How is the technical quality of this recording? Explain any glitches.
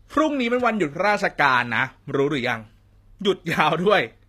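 The quality's noticeably compromised by codec damage. Throughout, the treble sounds rebuilt rather than captured, nothing above 14.9 kHz, with gritty, lispy sibilants, likely HE-AAC compression copying lower bands upward, which fits roughly 24 kbps.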